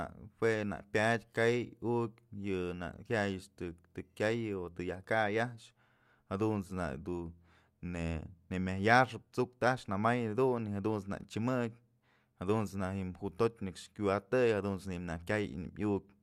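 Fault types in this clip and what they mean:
Channel delay (comb filtering): from 4.53 s to the end, one channel lags the other by a tiny fraction of a millisecond, consistent with a single-sample offset. Summed to mono, the pair cancels at the very top, with the first notch near 20 kHz, slightly dulling the speech.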